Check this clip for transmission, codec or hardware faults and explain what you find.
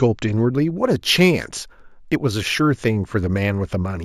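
One fault stands out: imaging from linear upsampling, running from 0.33 s to the end of the speech. The audio behaves as if it was raised from 16 kHz to 48 kHz by joining samples with straight lines. That weak interpolation softens the top of the original band and leaves a mirrored copy of the spectrum between 8 and 16 kHz, roughly 25 dB below the signal. It comes through as a faint metallic shimmer on sibilants. Unlike aliasing, the stray energy sits above the original band rather than folding down into it.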